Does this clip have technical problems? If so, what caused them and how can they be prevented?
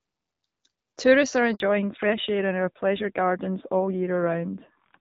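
Yes. At 1.54 s the speech dies away and stays silent until 1.60 s, a 60 ms handover gap. The call was moved from one network link to another, and during the switch no speech frames reached the receiver, so the decoder had nothing to play and that stretch of speech is simply missing. Preventing it means tuning handover so the new link is set up before the old one is released, keeping the frame stream unbroken.

From 1.60 s to the end the speech sounds duller, boxier and rougher than before. This is a fallback to narrowband: the call dropped out of AMR wideband (HD Voice), which up to that point was clear with only light coding damage, onto an older narrowband codec, and nothing above 4 kHz survives. The coarser texture fits AMR-NB at around 7.4 kbit/s. Preventing it means making sure both ends and the target network support wideband, so the codec is kept through the handover.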